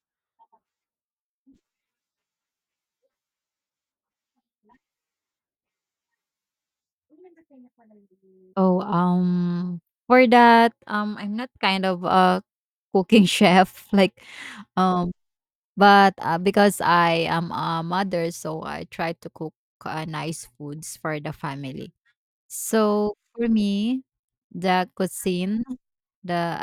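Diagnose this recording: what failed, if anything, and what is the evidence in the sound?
Nothing failed; the speech shows no audible fault anywhere.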